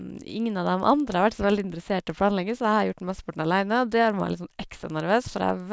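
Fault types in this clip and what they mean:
Resampler restarted on every block: the conversion from 48 kHz down to 16 kHz starts fresh for each 100 ms block, so each block edge is filtered without its true neighbouring samples and carries a small error. The speech picks up a steady tick at 10 Hz that follows the signal and falls silent in pauses. Buffer underruns give irregular clicks with audible gaps, while these ticks are evenly spaced and no audio goes missing.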